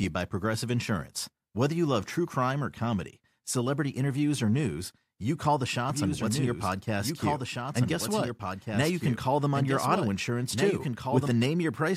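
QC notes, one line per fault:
5.90–11.28 s, doubled audio track: a dry full-band copy trails by about two seconds, about 5 dB down, cutting in and out abruptly, likely from a second, slower capture path.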